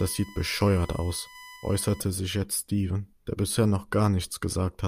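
A steady, fixed-pitch whine sits under the speech from 0.0 to 2.0 s, stopping just before "sich jetzt", roughly 20 dB below the speech. It is USB whine: the bus draws current in 1 ms frames, and that 1 kHz pulsing leaks into the audio through the power or ground. The tone is built on 1 kHz, but its strongest part is the 2 kHz harmonic.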